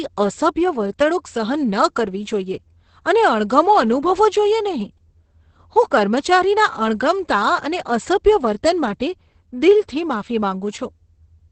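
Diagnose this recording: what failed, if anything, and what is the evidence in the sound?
The codec stage failed: heavy Opus voice compression throughout, at a rate that sounds like about 10 kb/s with the linear-prediction coder in wideband. Nothing survives above 8.5 kHz, so the speech is muffled, and the coarsely coded excitation makes it hoarse and slightly robotic.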